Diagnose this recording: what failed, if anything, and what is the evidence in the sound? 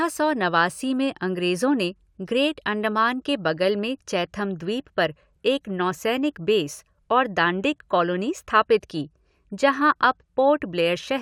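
Nothing in this speech recording points to a failure at any stage of the chain. The sound carries no audible evidence of a breakdown in capture, conversion, processing, transmission, storage or playback.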